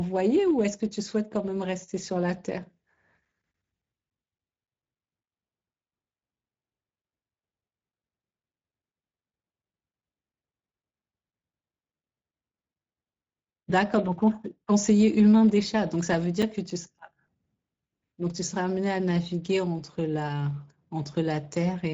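The whole clip carries Speex codec damage: the speech is plainly hoarse and noisy, with that grainy CELP texture from a starved excitation, which fits a mid-rate setting around 16.8 kbps. Nothing comes through above 7.7 kHz, so the top end sounds capped.

From 2.97 to 5.80 s there's a run of CD scratch ticks, 11 of them at roughly four a second, the longest about 10 ms. That's a blemish knocking out more data than error correction can rebuild on each turn, so the player patches or mutes those samples. It happens again from 15.85 to 18.12 s, with 9 ticks at a similar rate and the longest under 10 ms.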